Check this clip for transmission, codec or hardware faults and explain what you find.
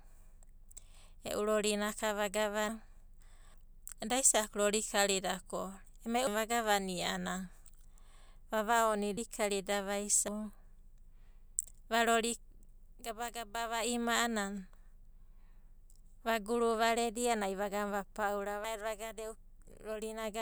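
The speech has compressed frames skipped at 2.69, 3.54, 6.27, 9.17, 10.28, 12.59 and 18.64 s. Whole frames of about 85.3 ms were dropped before decoding, so the audio leaps forward. The biggest jump, about half a second, is at 2.69 s, and the smallest, around a tenth of a second, is at 12.59 s. On a spectrogram the harmonic tracks break off and restart suddenly. The waveform shows the envelope jumping at the same point.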